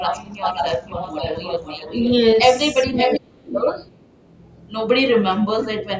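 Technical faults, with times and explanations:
0.0–2.12 s, echo leak: a delayed copy of the sound trails by about half a second (around 0.51 s), sitting roughly 10 dB under the direct signal. Likely a far-end speakerphone whose echo canceller let some of its pickup back through.
2.95–4.69 s, echo leak: the same kind of delayed copy returns, again about half a second behind (around 0.52 s), but louder this time, only about 5 dB down.
0.14–0.19, 1.62–1.78 and 2.89–3.34 s, speech suppressed in double talk: the speech dips, gently at first (about 5 dB, then about 10 dB) and then almost vanishes at the last spot, roughly 30 dB down. This is likely the echo canceller ducking everything while both ends overlap.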